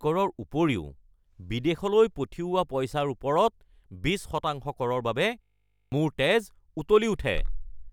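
From 5.42 to 5.92 s the speech locks into a system hang loop. The computer or driver stalled while the sound hardware kept replaying its ring buffer, so one 20 ms slice of audio repeats exactly, 25 times over. At that length the loop runs at 50 Hz, so you hear a flat, steady buzz instead of a stutter, and about half a second of real audio never gets through.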